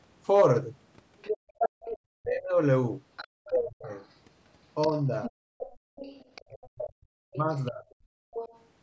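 From 1.21 s to 8.63 s a second voice sits under the speech, about 10 dB below it. This is the other side's voice leaking through. The talker's device is likely playing the far end on a loudspeaker, and the echo canceller has not fully removed it from the microphone pickup.

Between 1.38 s and 1.82 s the room sound dips sharply, by about 35 dB at its deepest and for roughly a third of a second in total. This is background gated by the echo canceller. While the loudspeaker was active, the canceller clamped the microphone gain down hard, and the ambience returned once it released. The same gating recurs from 5.43 s to 5.96 s (about 34 dB, roughly 0.4 s) and from 8.12 s to 8.33 s (about 34 dB, roughly 0.2 s).

From 2.16 s to 7.84 s the talker's own speech is pulled down, by as much as about 40 dB, adding up to around two seconds of affected audio. This is speech suppressed in double talk, likely because both sides were talking at once and the canceller could not separate the local voice from the loudspeaker echo, so it attenuated both. 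The resulting gaps and dips are heard against audio that, as expected from call microphone processing, has nothing above 8 kHz.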